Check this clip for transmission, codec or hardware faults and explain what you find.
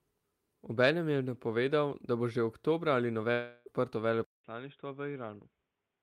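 Two faults are audible in this speech clip: a gap in transmission and then a change of input device near the end.

Long network dropout, 3.31 to 3.68 s: most likely incoming audio stopped arriving, and the receiver bridged about 0.34 s by stretching the last sound into a fading buzz rather than silence. When the speech resumes, that missing stretch is simply gone.

Input switched to a poorer device, from 4.24 s to the end: after a 0.2 s silence, the speech turns dull and boxy with nothing above 3.8 kHz, drops roughly 10 dB in level, and carries a faint new background noise, likely from a lower-quality microphone or headset.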